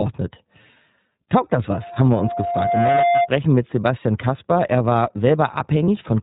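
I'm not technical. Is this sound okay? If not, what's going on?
No. The speech was squeezed through the iLBC codec, a phone-call style coder that handles the voice in 30 ms chunks and drops everything above 4 kHz. The whole recording therefore sounds muffled, slightly rough and a bit artificial.

From 1.81 to 3.3 s there is a loudspeaker feedback squeal. A microphone picked up the speaker it was feeding, and one pitch, around 696 Hz, kept looping and growing. Over about a second it swells into a whistle that ends up louder than the speech.

At 5.85 to 5.88 s there are lost iLBC frames. One 30 ms piece of the signal went missing, and the decoder filled the hole by repeating the last bit of voice with some noise. You hear a very brief buzzy hold before the speech carries on normally.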